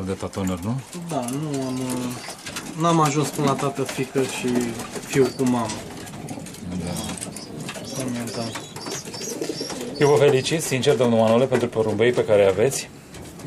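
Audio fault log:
5.16–5.18 s, loud pop: a single sharp pop about 10 dB above the surrounding sound, lasting about 25 ms, likely a voltage pulse from a plug, switch or static discharge. Unlike a dropout or glitch, the sound carries on unbroken beneath it.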